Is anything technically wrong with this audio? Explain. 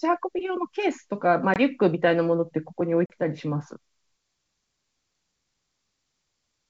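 Yes. There is packet loss on an ADPCM call, at 1.54 to 1.62 s and 3.06 to 3.12 s. About 20 ms and then 40 ms of speech drop into hard-edged silence, which fits one and then two lost packets. The decoder's predictor and step size lose track of the sender's. Speech comes back with brief distortion before settling. This happens within the G.722 wideband coding at 64 kbit/s.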